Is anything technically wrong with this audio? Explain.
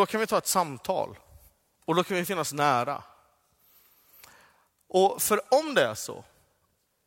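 No, there are no technical faults to report in this speech recording.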